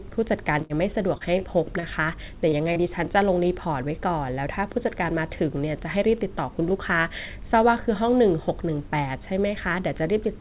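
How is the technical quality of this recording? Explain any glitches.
The first three seconds of the speech are marred by a cluster of network glitches, and the whole recording is telephone-band, with nothing above 4 kHz, which fits a G.711 A-law call path at 64 kbps.

At 0.62 to 0.73 s a sound is drawn out into a fading, held sound before the speech jumps ahead. This is a burst of packet loss. About 30 ms of audio never arrived, and the receiver stretched the last sound for roughly 74 ms while its playout delay grew by 44 ms.

At 1.18, 1.80, 2.49 and 2.73 s there are brief smears or wobbles, each about 30 ms long, where a short sound can drop out. Each is a short concealed packet loss: a packet went missing and the receiver extrapolated the preceding sound, then blended back into the real audio.

At 1.39 to 1.44 s a sound is held slightly too long, with a slight buzz or dip, but nothing is skipped. 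This is a short stall from a late packet. The jitter buffer emptied, and the receiver stretched the audio by about 21 ms until the packet arrived, then resumed from the same point.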